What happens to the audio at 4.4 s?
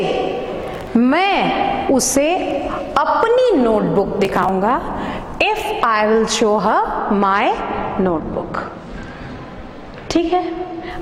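At 4.4 s the audio is inside a burst of processor overload crackle running from 4.25 to 4.49 s. Around fifteen buffers of about 3 ms each miss their deadline and are skipped, so hard-edged gaps pile up into a short, gritty tearing crackle.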